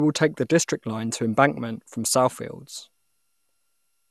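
Generation loss throughout: repeated lossy re-encoding, likely about seven MP2 passes, piles up quantisation noise, leaving swirly, hollow, smeared speech with nothing above 12.6 kHz.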